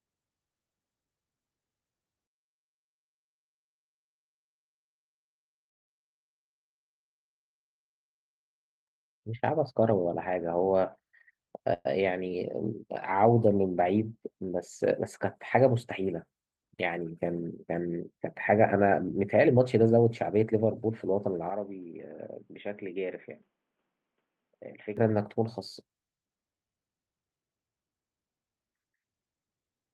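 From 11.12 to 11.61 s the speech runs at 116% of normal rate with no change in pitch: a jitter buffer speed-up. The receiver had more audio queued than its target and trimmed it by repeatedly cutting out short spans of one or a few pitch periods, removing around a tenth of a second in total. The passage sounds briefly rushed.

Shortly after, from 11.74 to 11.87 s, there is a call audio freeze. The last sound is stretched into a fading fill lasting about 116 ms, with roughly 10 ms of near silence, and then the speech resumes exactly where it left off, with nothing skipped. This is likely a short stall in packet arrival that emptied the jitter buffer, so the receiver concealed the wait and added the same 116 ms of delay.

A second, longer jitter buffer speed-up runs from 19.45 to 21.27 s at 110%. It is audibly hurried, and it drains about a fifth of a second of accumulated delay.

From 21.50 to 24.97 s the input is switched to a poorer device, likely a change to a different microphone or a headset call profile. 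There is no gap at the change. The band is cut off at 3.8 kHz, so the speech turns dull and boxy, the level drops by about 10 dB, and a new noise floor appears about 45 dB below the signal. The full-band sound returns at 24.97 s.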